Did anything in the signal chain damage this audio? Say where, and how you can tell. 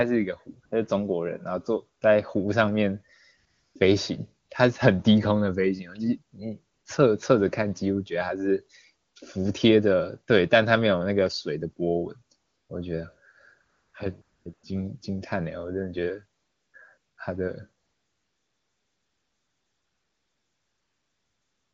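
Yes, in call processing. AMR comfort noise replaces the real background in twelve gaps between 0.65 and 17.83 s, lasting 20 to 340 ms, then continuously from 17.83 s to the end. Voice detection judged the talker silent, so the receiver synthesised smooth, steady noise.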